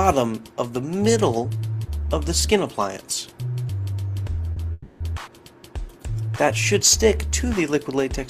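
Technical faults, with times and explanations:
4.53–4.58 s: short stall from a late packet. A packet arrived late, so the last sound gets held for 30 ms. Nothing's lost, it just lands a bit later.
4.72–5.02 s: call audio freeze. The sound hangs and fades for 280 ms, never quite dropping to silence, then resumes where it stopped, likely because delayed packets emptied the jitter buffer.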